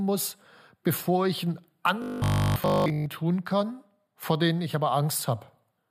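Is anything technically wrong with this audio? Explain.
Yes. From 2.02 to 3.08 s, between "bevor ich einen" and "tun kann vor denen", the speech collapses into robotic sound from repeated short buffers. It becomes a rigid, metallic 50 Hz buzz that only loosely tracks the words. The likely cause is audio arriving too slowly, so essentially the whole stretch is a 20 ms chunk replayed over and over while the real signal is skipped. The waveform shows a block repeating every 20 ms, and the spectrogram shows evenly spaced harmonics on a 50 Hz grid.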